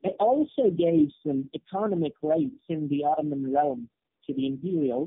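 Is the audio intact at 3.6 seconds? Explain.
No. At 3.6 s the speech carries tandem speech coding, present throughout the clip. The sound points to three low-rate speech codecs in a row, each re-coding the last one's degraded output. The speech sounds rough, muffled and warbly, with nothing above 3.6 kHz.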